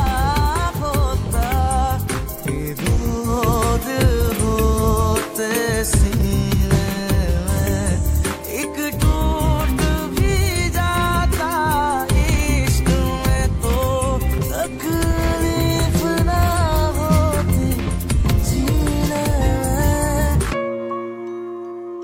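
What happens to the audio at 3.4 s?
At 3.4 s the audio is in a digital radio blend to analogue, lasting from 3.19 to 6.20 s. The receiver lost its digital stream and cross-faded over 151 ms to the FM broadcast. Hiss rises to roughly 30 dB below the signal, and the level shifts by about 2 dB.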